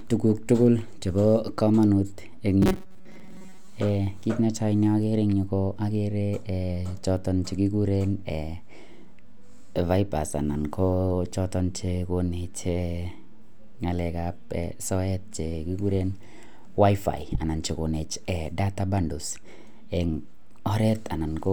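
From 2.62 to 3.68 s the speech becomes a rigid, metallic buzz at 188 Hz, robotic sound likely from repeated 5.3 ms buffers replacing about half the audio.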